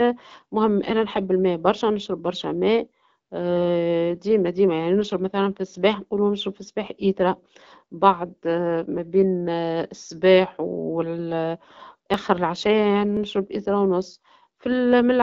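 From 12.14 to 14.2 s, periodic USB or driver dropouts recur every 1.02 s, each skipping about a millisecond of audio and leaving a regular tick. On a spectrogram capped near 7.3 kHz by the AMR-WB coding, each appears as a thin vertical broadband line; the waveform shows a small step discontinuity.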